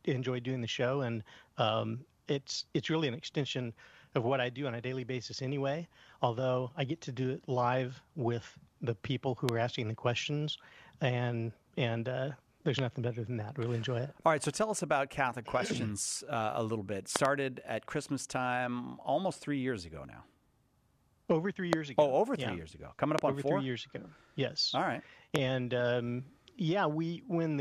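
Loud pops land at 9.49 s, 12.79 s, 17.16 s (a double one spanning about a tenth of a second), then 21.73 s, 23.19 s and 25.36 s. Each jumps roughly 20 to 25 dB above the sound, which carries on underneath. It's likely a voltage spike from a plug, switch, static or driver glitch.

Between those, at 20.05 s, there's a tiny glitch from an overlap between stream segments. About 5 ms gets trimmed at a boundary, which fits 4-second segments, so the waveform steps abruptly and you hear a brief skip.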